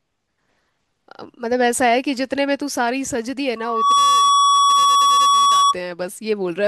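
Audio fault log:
3.56–5.75 s, loudspeaker feedback squeal. A single tone near 1.1 kHz swells in under half a second. It then rings roughly 10 dB above the speech. The microphone picks up its loudspeaker. At this pitch the loop gain exceeds one, so the tone feeds itself.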